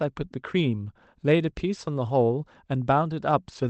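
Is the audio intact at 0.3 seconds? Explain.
Yes, the audio is intact at 0.3 s, with nothing there beyond the ordinary band-limited sound of a call path that tops out around 8 kHz.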